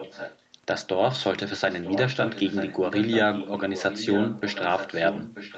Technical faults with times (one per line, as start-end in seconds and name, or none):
0.00-0.41 echo leak
1.60-5.57 echo leak